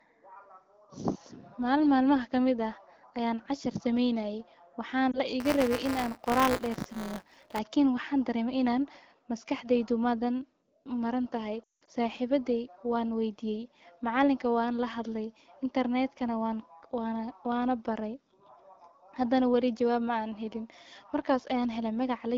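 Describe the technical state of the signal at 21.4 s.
At 21.4 s the signal is intact, with the speech carried through the AMR wideband (HD Voice) codec and no fault present at that moment.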